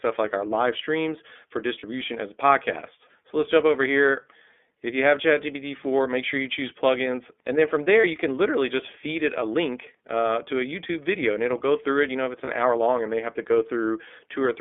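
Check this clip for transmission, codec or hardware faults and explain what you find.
Two faults are audible in this speech: iLBC codec coloration throughout, and three brief iLBC frame losses.

iLBC codec, throughout: each frame is coded independently within a line band of about 250 Hz to 3.5 kHz, consistent with the 13.33 kbps, 30 ms-frame mode. The result is plainly rough, synthetic, muffled speech.

Lost iLBC frames, at 1.79–1.84 s, 8.01–8.05 s and 12.44–12.49 s: the decoder fills each gap, which fits one 30 ms frame, by repeating the last pitch cycle mixed with noise. Each sounds like a short, slightly buzzy or breathy held vowel that recovers immediately.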